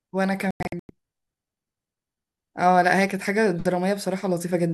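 At 0.51 s a digital broadcast dropout begins: the receiver lost good frames and muted until valid ones returned. Through 0.90 s the speech breaks into several short silent holes, the longest about 96 ms, totalling roughly 264 ms across 384 ms.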